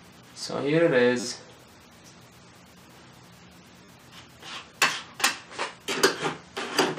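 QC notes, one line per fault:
1.20–1.24 s, repeated buffer: a brief buzzy stutter as one tiny slice plays four extra times with hard joins, consistent with late audio and a 10 ms buffer replayed.
3.85–3.88 s, repeated buffer: a shorter buzz where the same slice of sound loops three extra times, again pointing to a 10 ms buffer reissued while the audio arrived late.
5.90 s, repeated buffer: a single click as one 10 ms slice of sound plays once more, with no audio apparently skipped.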